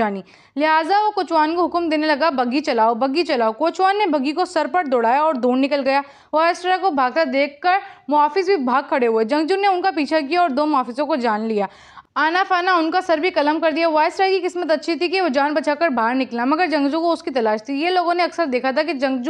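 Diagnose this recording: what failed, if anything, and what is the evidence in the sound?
Nothing failed; no faults present.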